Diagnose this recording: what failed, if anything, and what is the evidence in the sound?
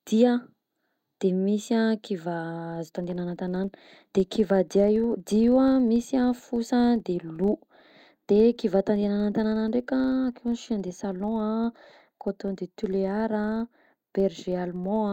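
From 2.72 s to the end of the clip at about 15.13 s, the speech carries a steady 25 Hz buzz, a rapid train of ticks that grows louder and softer with the talker's level. This is a filter restarted on every block, in the call-processing stage: the filter discards its stored state at each block boundary and starts again from silence, so every block opens with a small transient. A 25 Hz repeat rate points to 40 ms processing blocks.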